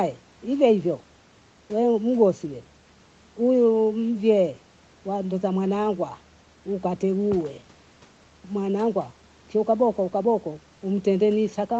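Nothing stood out on listening to this speech, which has the band-limited sound of a call, with nothing heard above about 8 kHz.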